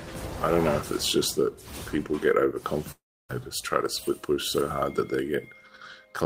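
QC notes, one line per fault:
2.91–3.31 s, long network dropout: the sound stops carrying new material and turns into a smeared buzz that fades, then settles into near-silence for about 0.3 s before resuming with roughly 0.38 s of audio gone. This is likely packets failing to arrive while the receiver stretched the last sound to cover the gap. On a spectrogram, the frequency bands repeat and decay before going dark. On the waveform, a shrinking envelope gives way to a flat line and then an abrupt restart.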